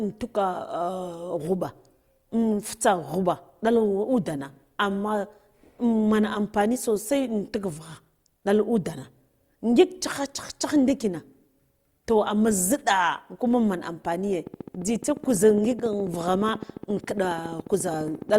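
Likely interference from nearby equipment or a faulty connection injects a regular pulse into this speech recording, producing a train of clicks from 14.47 to 18.37 s. Around fifty near-identical ticks arrive at 14.4 per second, peaking about 5 dB above the speech and continuing through the pauses.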